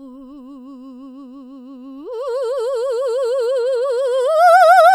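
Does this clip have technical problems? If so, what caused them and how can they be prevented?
No, nothing in this music clip stood out as a technical problem on listening, so there is no cause to trace and nothing to prevent.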